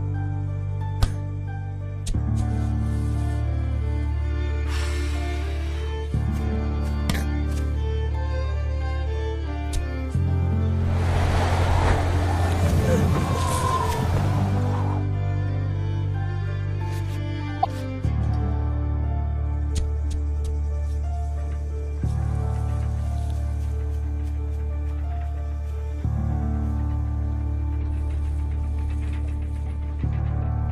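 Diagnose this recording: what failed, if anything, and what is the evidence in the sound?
At 17.62 to 17.66 s the audio jumps ahead through a brief glitch. Codec stage: likely a broken MP3 bit reservoir, with following frames reading another frame's bytes.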